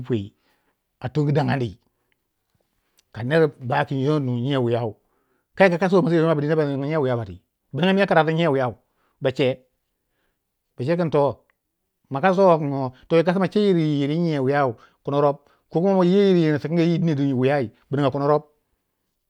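A speech recording with no technical fault to be heard anywhere in it. There is nothing to place at a particular time or trace to a cause.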